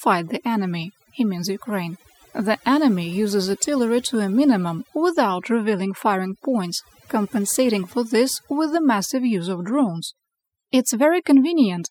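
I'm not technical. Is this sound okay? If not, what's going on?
No, it isn't. Overdone noise removal runs throughout the whole clip. A cleanup tool meant to strip background noise was pushed much too hard. Wherever part of the sound resembled the noise it was hunting, it switched that slice of pitch off, catching the softer parts of the speech too. The result is a background that drops and breaks up into small twinkling sparkles.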